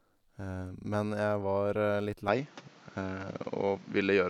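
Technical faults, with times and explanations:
2.28–4.30 s, input switched to a poorer device: the speech abruptly narrows and changes tone, likely because another microphone took over. A spectrogram shows nothing above 7.6 kHz and a new noise floor about 30 dB down. The waveform steps about 5 dB, without a gap.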